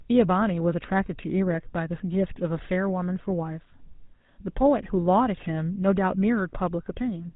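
From start to finish, the speech carries the sound of the GSM full-rate codec. The damage is plainly audible. There is a buzzy, gravelly roughness on every voiced stretch. Nothing reaches above 4 kHz, so the sound is dull and boxed in. The codec models the vocal tract and drives it with a regular pulse train, keeping only one excitation sample in three. The coarseness fits a 13 kbit/s stream.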